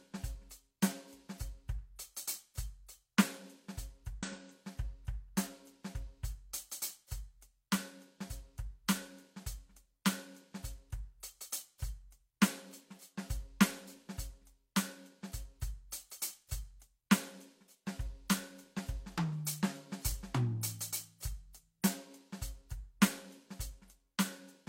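A brief glitch cuts into this music from 4.18 to 4.24 s. It is damaged data in a compressed stream: corrupted bytes there leave the decoder misreading frames and losing sync until it locks onto the next valid frame header.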